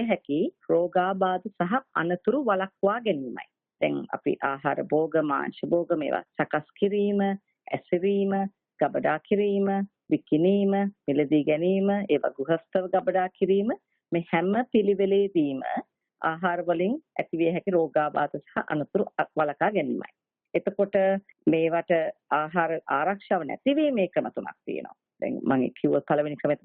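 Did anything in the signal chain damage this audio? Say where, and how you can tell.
No, nothing in the signal chain damaged this audio, so there is no stage to point to.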